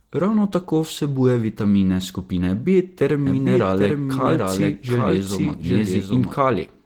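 Opus voice compression runs through the whole speech clip. The codec appears to be in its hybrid mode, with the linear-prediction SILK layer carrying the band below 8 kHz and a CELT layer filling in above it, so the band stays full, reaching about 20.1 kHz. The bit budget is thin, which fits a rate around 16 kbps in 20 ms frames. The excitation is coded coarsely, and the voice comes out plainly muffled, hoarse and faintly robotic.

A doubled audio track runs from 3.26 s to 6.34 s. A second, full-band copy of the same speech trails the original by roughly 0.7 s, at a level about 5 dB below it. It has no decay or room colour, so it sounds like a clean, flat repeat rather than an echo, and it cuts in and out abruptly at those two times. The likely cause is the audio being captured a second time through a slower path and mixed back in.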